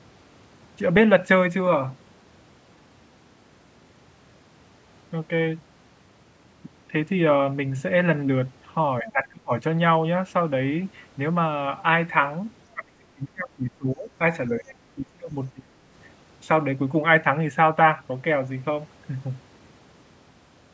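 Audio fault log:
9.02–9.53 s, 12.74–14.10 s, 14.58–15.35 s and 15.52–15.74 s, speech suppressed in double talk: the speech sinks by roughly 25 to 35 dB or breaks up in pieces, longest around 1.4 s. This is likely an echo canceller that, with both sides talking, could not separate the talker from loudspeaker echo and turned everything down.
14.67–14.71 s, other side's voice leaking through: a brief, faint scrap of a second voice, about 30 dB below the talker, slips in during the suppressed stretch. This is likely far-end audio from the loudspeaker that the echo canceller did not fully remove from the microphone.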